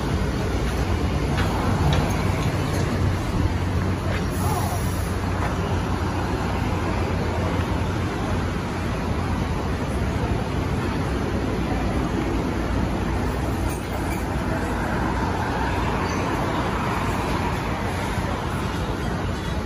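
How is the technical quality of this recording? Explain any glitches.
The technical quality of this recording is sound, with no glitches to explain.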